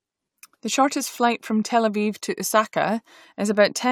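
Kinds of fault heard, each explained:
No kinds of fault turn up here, so there's nothing on this recording to list or explain.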